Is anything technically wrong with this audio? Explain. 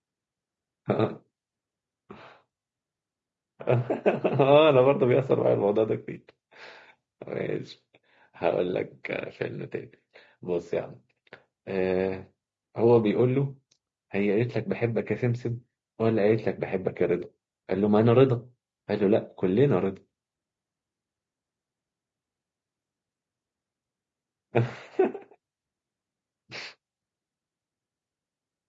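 Yes. Throughout the speech there is a steady rough, grainy texture with noise filling the gaps between voice harmonics, plainly audible and likely from low-delay AAC compression (AAC-ELD) at a low rate, consistent with around 32 kbps. Its short frames resolve pitch harmonics poorly, starving detail.

AAC frame loss with concealment occurs at 6.13 to 6.17 s and 17.19 to 17.23 s. Each gap covers about 20 ms, which fits a single lost frame. The decoder rebuilt it from the preceding spectrum, leaving a brief smeared, noisy patch.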